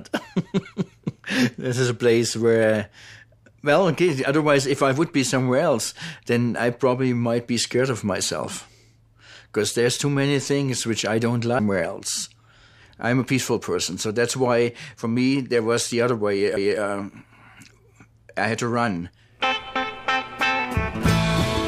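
At 16.57 s a brief tick and a momentary dropout of roughly 5 ms break the sound, which then resumes from a different point: a CD skip. The laser jumped to another turn of the disc's spiral, and the player muted briefly before carrying on from there.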